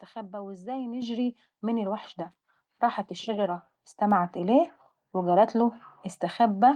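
It's a speech clip with the microphone volume stepped up twice: at 1.02 s everything jumps by about 8 dB, then at 2.04 s by about another 4 dB. Voice and background rise together, so it's the call software bumping the device's input gain, not the talker.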